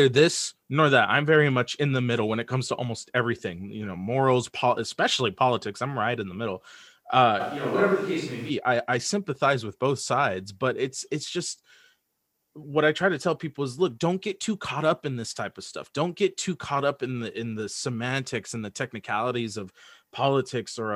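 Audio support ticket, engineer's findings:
Switch to a distant microphone, 7.41–8.49 s, after "in the middle uh", back before "i i sympathize with". Sound turns abruptly roomy and hollow, bass thinned, level down about 5 dB, room noise up to roughly 25 dB below the speech. Likely the close mic's signal dropped out, with a far pickup filling in.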